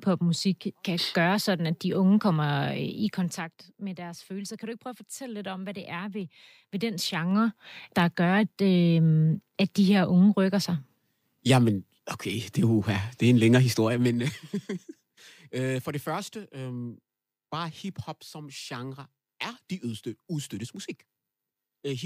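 Zipper noise appears three times in this speech, where the level is stepped in 2 dB jumps with no smoothing, each jump leaving a small click. From 2.92 to 3.7 s, just before "med deres følelser", the level drops by roughly 10 dB at about ten steps a second, a quick ticking riding on the voice. From 6.12 to 7.64 s, after "om hvad det er", it rises by roughly 10 dB at a slower five steps a second, so the clicks are more widely spaced. From 13.94 to 14.39 s, after "det er en længere", it falls by roughly 10 dB at about twenty steps a second, a brief, dense zipping.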